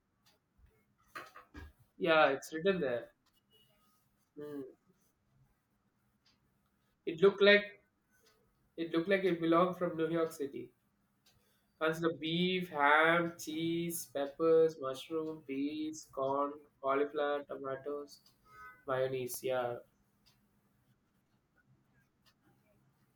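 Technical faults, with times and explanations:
19.34 to 20.41 s, CD scratch ticks: five small ticks over about a second of the speech, roughly five a second, the longest lasting just a few milliseconds. That steady spacing is the giveaway. A scratch or blemish on the disc passes the laser once per revolution, and each pass wipes out more data than error correction can rebuild, so the player patches or mutes those few samples and you hear a brief tick.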